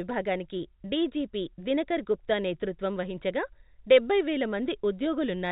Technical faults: none

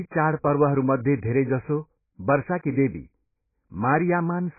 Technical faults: AAC compression

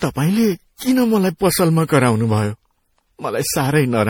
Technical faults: generation loss

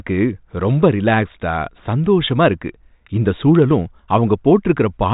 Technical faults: none

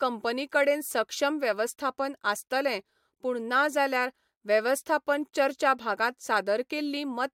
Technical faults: none

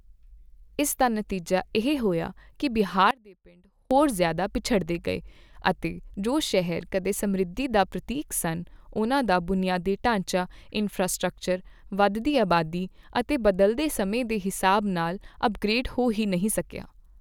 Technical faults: one channel inverted

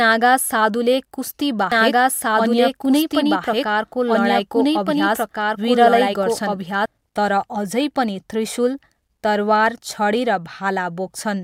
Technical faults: doubled audio track

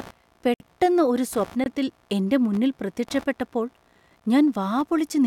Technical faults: computer activity noise; block of digital silence

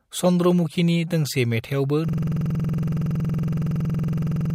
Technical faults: system hang loop

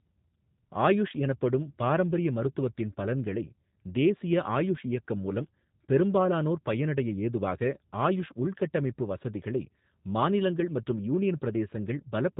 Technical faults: G.729 codec

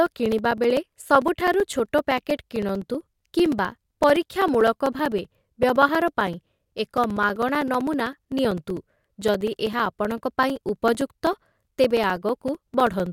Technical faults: periodic USB or driver dropouts

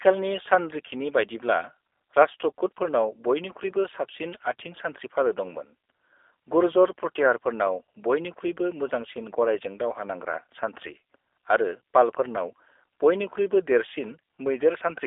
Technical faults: G.729 codec

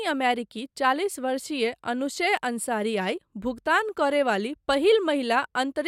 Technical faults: none

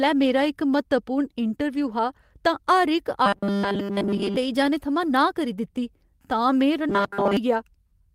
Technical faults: robotic sound from repeated short buffers

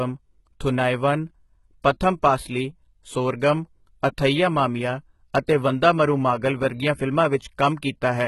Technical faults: HE-AAC compression; pre-echo

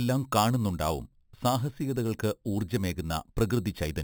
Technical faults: imaging from sample-and-hold upsampling

